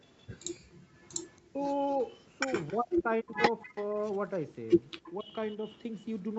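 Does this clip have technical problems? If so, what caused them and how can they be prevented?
Yes. Background gated by the echo canceller, 0.6 to 0.95 s: the room sound falls away by about 36 dB, for roughly 0.4 s in total, and then returns. The canceller clamped the microphone hard while the far end's loudspeaker was playing, taking the ambience with it. A gentler suppression setting, or comfort noise filling the gap, would keep the background steady.

Echo leak, at 1.23 to 1.38 s, 1.91 to 2.73 s, 3.61 to 4.39 s and 4.98 to 6.04 s: a delayed copy of the speech trails the original by 276 ms. It starts very faint and grows to roughly 25 dB below the main speech in the later passages. This is likely loudspeaker sound reaching the far side's microphone and getting past its echo canceller. Headphones at that end, or a better-tuned canceller and more space between speaker and microphone, would stop it.

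Speech suppressed in double talk, at 1.52 to 1.58 s, 2.7 to 3.78 s and 5.2 to 5.35 s: the speech briefly loses level. The dip is deepest, around 40 dB, in the middle stretch, which fits with both sides likely talking at once while the canceller turned everything down. A canceller with better double-talk detection, or less echo for it to fight, would keep the talker audible.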